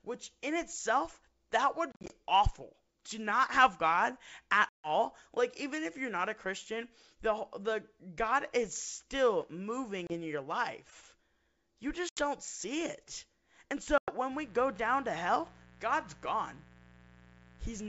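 A speech recording carried over a G.722 wideband link, with hard-edged dropouts from packet loss on an ADPCM call at 1.92–2.14 s (after "which in itself that"), 4.69–4.90 s, 10.07–10.15 s (before "your life"), 12.09–12.22 s and 13.98–14.15 s. Each dropout is followed by briefly, slightly distorted speech while the decoder's predictor resynchronises. From 14.31 s to the end there is a steady, raspy 60 Hz mains buzz, about 25 dB below the speech, from spiky switching interference on the power line.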